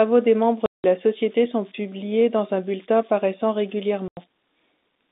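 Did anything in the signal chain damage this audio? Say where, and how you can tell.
Yes. Two stages did damage. The first is the converter. Converter idle tones run through the whole clip. A whistle sits around 7 kHz, about 25 dB below the speech. It is clearest in pauses. Under quiet speech it turns to a grainy hiss. The cause is a delta-sigma converter working without dither. With a small input it falls into repeating bit patterns. Those patterns come out as steady tones instead of random noise.

The second is the network. There is packet loss filled with silence in two places. The first hole runs from 0.66 to 0.84 s, lasting 180 ms. The second runs from 4.08 to 4.17 s, lasting 90 ms. Both gaps start and stop with hard edges. Their lengths share a common unit, which points to 30 ms packets. The receiver had no concealment. It played plain silence where audio was missing. The G.711 line band itself sounds clean.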